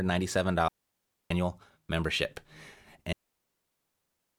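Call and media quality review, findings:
Clean holes of near silence in the speech, no click or noise burst either side. 0.68–1.31 s: 0.62 s mute. 3.13 s to end: 1.26 s mute. Probable component: digital wireless receiver. Mechanism: digital wireless dropout. Link lost too much data, receiver muted with a very fast fade instead of passing corrupted audio, hence silence rather than hiss or crackle.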